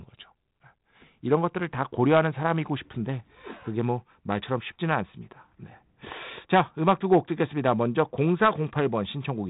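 Speech coded with G.726 ADPCM at 32 kbit/s, with nothing above 3.9 kHz, and no technical fault anywhere in the recording.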